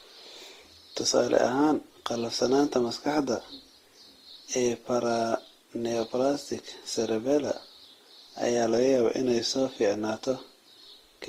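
Transcoding between lossy codecs runs through the whole speech recording. Nothing sounds above 15.8 kHz, and two layers of coding artefacts overlap, which points to a likely Vorbis encode near 34 kbit/s re-encoded as Opus near 24 kbit/s, each stage adding damage to the last. A drift correction step occurs from 8.74 to 9.49 s: playback slows by 5.38% and pitch drops by 95.8 cents, nearly a semitone, then snaps back, likely from clock-matching software changing its rate abruptly to rebalance its buffer.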